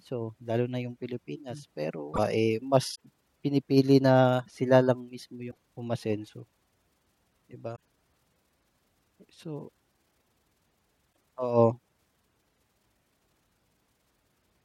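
Damaged data in a compressed stream breaks the speech at 2.10–2.19, 2.91–2.96, 5.47–5.56, 7.72–7.77 and 11.09–11.12 s. Corrupted bytes make the decoder misread frames and hunt for resync, producing brief squawks, chirps, clicks or short holes.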